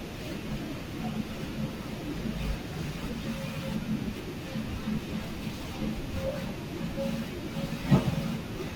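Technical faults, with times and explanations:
0.0–4.0 s, adaptive stream starting at a low bitrate: codec artefacts are heavier, which fits about 32 kbit/s Opus, until the player steps up without a gap.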